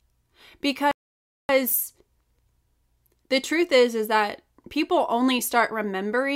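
At 0.91 s the speech cuts to silence for about 0.58 s, resuming at 1.49 s. This playback stall is likely the player running short of data or its thread being blocked. Unlike a brief dropout or click, the gap is a long, clean pause.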